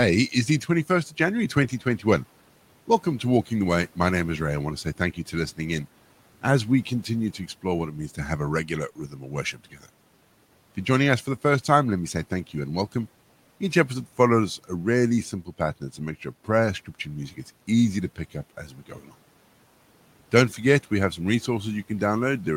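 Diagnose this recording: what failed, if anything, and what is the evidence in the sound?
Speech cut by the noise suppressor, a call-processing fault. Speech sinks at 1.55–2.04, 8.96–9.32, 9.53–9.87 and 18.68–19.15 s, by about 7 to 12 dB. The suppressor mistook quiet speech for background. Each time, roughly 0.15 to 0.2 s sounds swallowed.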